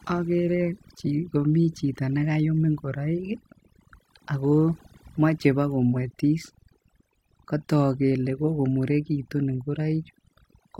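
Throughout, overdone noise removal pulls frequency bands near the noise estimate far down, leaving near-silent gaps with twinkling specks.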